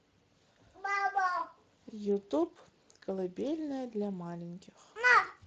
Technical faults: Speex codec

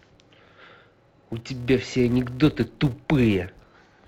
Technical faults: filter restarted on every block

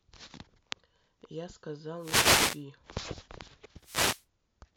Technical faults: wireless microphone noise hit; block of digital silence

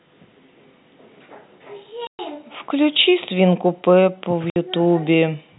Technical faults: packet loss filled with silence

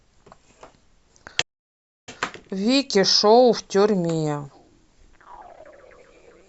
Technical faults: playback stall

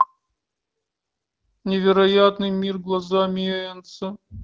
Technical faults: none

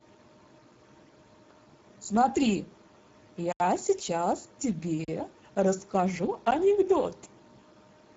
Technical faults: Speex codec; block of digital silence

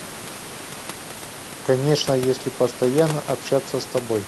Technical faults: none

